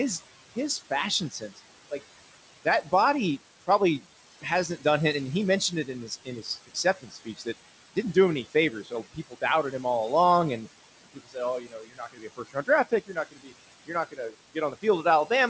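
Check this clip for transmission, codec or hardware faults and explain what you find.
The main trouble here is the noise suppressor: it's working hard and both leaves its own texture and eats bits of the speech. Above about 8 kHz there's nothing, which fits a wideband call codec.

Noise suppressor artifacts run through the whole clip. The suppressor pulls down whatever bands it reads as steady noise by about 18 dB, frame by frame. So the background dips between phrases and swells back under the voice.

Speech cut by the noise suppressor shows up five times: 1.3 to 1.6 s, 5.6 to 7.47 s (after "done it and he", before "it didn't do him"), 8.53 to 9.84 s (after "didn't do him any", before "all along and"), 11.04 to 13.53 s (right after "all along and"), and 13.86 to 15.29 s. The suppressor mistook quieter speech for noise and dropped it by about 14 to 19 dB. Endings and soft consonants come out swallowed. 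The worst stretch is around 11 to 13.5 s, where roughly a second of speech goes faint.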